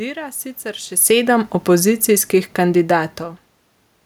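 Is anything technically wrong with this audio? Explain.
Yes. From 0.87 s to 3.05 s there is automatic gain falling. The gain control judged the input too loud or its background noise too strong, and pulled its gain down slowly, by about 4 dB across those two seconds. The speech sinks gradually, and the room noise sinks with it, which shows the change is in the system. Level shifts around 1 s and near 3 s come from the talker moving instead.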